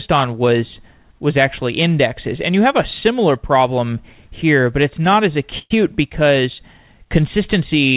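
Call audio freeze at 5.59–5.72 s, after "but it's not as": sound drags into a fading buzz, then speech resumes, likely because delayed packets emptied the jitter buffer.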